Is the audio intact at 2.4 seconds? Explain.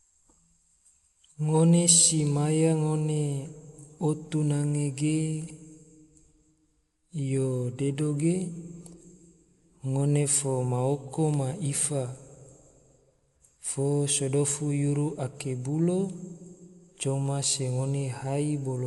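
No. At 2.4 seconds you're hearing the same damage that runs through the whole clip, likely Dolby Digital compression at a low rate, which fits something around 64 kbps. With that few bits, the encoder cuts the band, so there's nothing above 11.5 kHz and the speech sounds dull. Many frequency lines also get no real detail and come back as filler noise, giving a rough, fluttery grain around the voiced sounds that's plainly audible.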